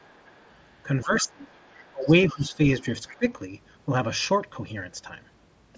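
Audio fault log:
0.0–0.68 s, 1.02–2.39 s and 2.8–3.16 s, other side's voice leaking through: a faint second voice sits under the main talker, at about -35 dB, then about -30 dB, then about -25 dB relative to the speech. It is likely loudspeaker echo that the canceller left in the microphone signal. Unlike room reverberation, which trails the talker's own sound, this is a separate voice with its own timing, and it grows stronger with each stretch.
1.03–1.52 s, 1.92–2.59 s and 3.16–3.26 s, speech suppressed in double talk: the main voice sinks by up to about 20 dB across roughly 400 ms and then 500 ms, and by about 15 dB for about 100 ms in the last stretch. Each dip falls inside or right after a leak. The canceller likely heard both sides at once and turned everything down. What sets this apart from a transmission dropout is that the level is pushed down while sound continues, and the dips follow the other voice, with no buzz.
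4.81 s, concealed Bluetooth headset packet loss: a 7.5 ms hole, which points to a single lost headset frame, is filled by repeating a matching piece of the preceding waveform. The patch is nearly hidden, and the level does not dip. That separates it from the double-talk suppression, which lasts hundreds of milliseconds. Because it is one brief loss, it never builds into the held buzzy tone of a longer run. The mSBC band up to 8 kHz runs straight through the patch.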